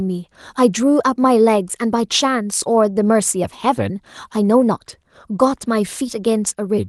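No technical faults are audible.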